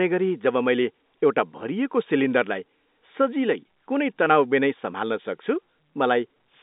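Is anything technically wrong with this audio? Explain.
No, there's nothing wrong here: it's speech carried over ordinary G.711 telephone coding, which fits the narrow line band of roughly 200 Hz to 3.7 kHz, and that's just how a phone call is meant to sound.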